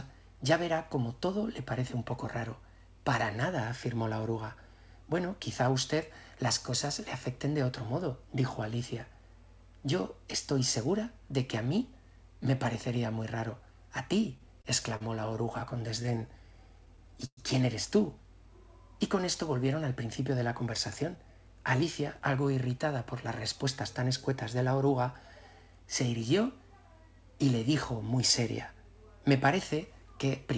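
From 14.38 to 16.09 s, repeated stalls (stutter): the jitter buffer ran dry eleven times, and short continuations of the last sound, up to 38 ms each, make the audio drag and catch. Between 16.12 and 17.15 s, a jitter buffer slow-down repeats pitch periods to rebuild the reserve, adding 60 ms, so the audio plays at 95% speed at unchanged pitch. Overlapping this, from 16.86 to 17.39 s, four more stalls occur, the longest a 106 ms fill that fades. From 19.75 to 22.43 s, a jitter buffer speed-up trims about 150 ms of pitch periods to cut excess delay, and the audio runs hurried at 106% speed. Throughout, nothing is heard above 8 kHz, consistent with a G.722 call codec.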